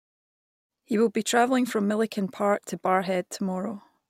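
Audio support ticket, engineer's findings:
No faults found; fade-in normal.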